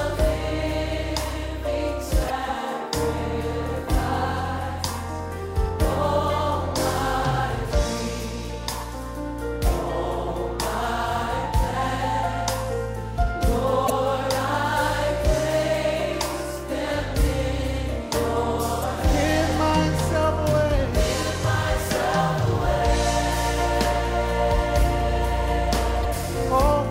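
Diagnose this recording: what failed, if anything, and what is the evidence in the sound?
Damaged data in a compressed stream at the codec stage: short glitches at 2.26–2.31, 13.86–13.90, 18.80–18.84 and 26.01–26.05 s, each a brief disturbance where the decoder lost frame sync.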